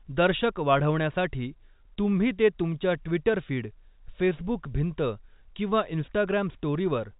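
There are no technical faults to describe in this speech recording, which carries the narrow telephone band of G.711 coding with nothing above about 3.8 kHz.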